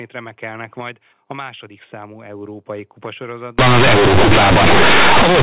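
From 3.59 s to the end, companded audio read as linear: mu-law bytes played as raw 8-bit samples, giving loud buzzy distortion and noise in pauses, unlike clipping, which spares quiet passages.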